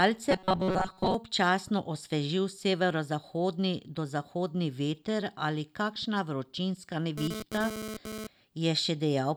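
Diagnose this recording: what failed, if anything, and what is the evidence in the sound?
Two separate problems. From 0.31 to 1.15 s the speech goes rigid and metallic, locked to a 188 Hz buzz. That's robotic sound from repeated short buffers, likely at the driver or buffer stage: roughly 5.3 ms chunks replayed over and over, covering most of that stretch while the real audio got skipped.

Then from 7.18 to 8.27 s there's a hard, raspy 217 Hz buzz full of harmonics, sitting about 8 dB under the speech and unrelated to it. That's GSM phone buzz in the analogue wiring: a nearby 2G phone doing a data transfer, its bursting transmission rectified by the audio circuit, so it comes and goes.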